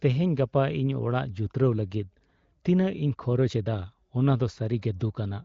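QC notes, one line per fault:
Nothing to flag here, just speech carried over the AMR wideband (HD Voice) codec, with the band topping out around 7.5 kHz and at most faint coding damage, which fits one of the higher rates near 18 kbit/s.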